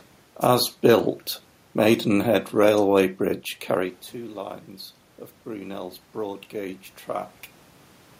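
From about 5.44 to 7.37 seconds you can hear automatic gain rising. The input level had dropped by about 14 dB, so the gain control decided things were too quiet and slowly pushed its gain up, by about 4 dB over roughly two seconds. Because it lifts everything together, the voice and the room noise swell up in step. The earlier level shift around three and a half seconds is just the talker moving.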